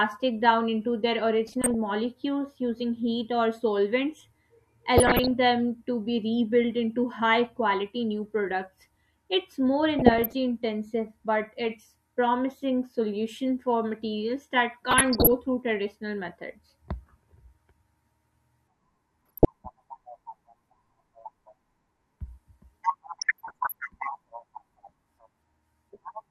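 DAB burbling at 1.47–1.75 s (just after "down into their"), 4.98–5.31 s, 9.99–10.33 s, 14.86–15.36 s, 19.26–19.45 s and 23.19–23.74 s: weak reception lets bit errors past correction into the MP2 stream, jolting individual sub-bands in level, so the speech is broken by short blips of noise.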